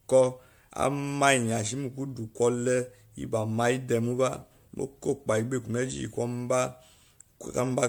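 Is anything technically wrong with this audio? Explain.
Yes. Throughout the speech there is generation loss: the sound is swirly, hollow and smeared, with consonant onsets blurred, well beyond what a single lossy encode would cause. The likely cause is repeated decoding and re-encoding, around seven passes, in what sounds like MP3 near 96 kbit/s. Each pass requantises on a shifted frame grid, so the damage compounds. A spectrogram shows scattered holes and blotchy, time-smeared partials, with energy still reaching 20 kHz. In the waveform, transients look softened and pre-echoed.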